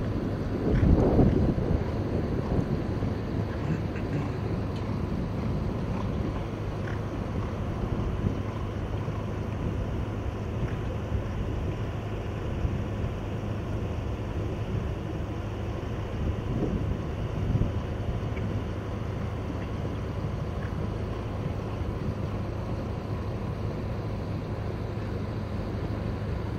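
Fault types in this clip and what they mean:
No technical faults can be heard anywhere in the recording.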